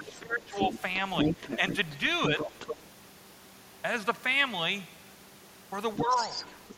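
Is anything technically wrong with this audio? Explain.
Yes. Two related echo-control faults affect this speech clip.

Speech suppressed in double talk appears from 0.00 to 0.75 s, where the talker drops by up to about 15 dB over roughly half a second, and again in shallower dips of about 5 dB at 1.24 to 1.61 s and 2.29 to 2.49 s. The likely cause is an echo canceller that could not separate the talker from the simultaneous far-end signal and turned both down. Unlike a network dropout, the voice dips in level.

The other side's voice leaking through is heard at 0.06 to 0.21 s (faint, about 20 dB below the speech), 0.54 to 0.79 s (about 5 dB down), 1.17 to 2.83 s (as loud as the talker) and 5.97 to 6.74 s (about 10 dB down). This is a second, different voice, not a delayed copy of the talker, so it is not room reverberation. It is likely residual loudspeaker pickup the canceller failed to remove.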